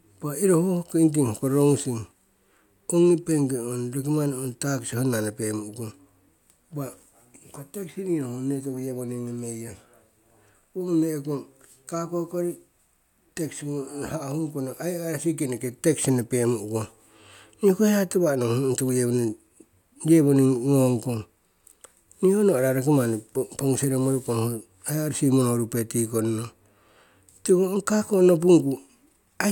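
No technical faults can be heard anywhere in this speech recording.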